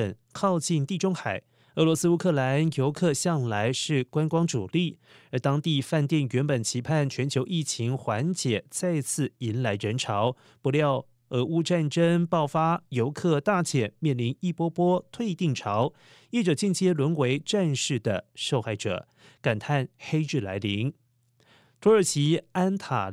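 No technical faults are audible anywhere in this speech recording.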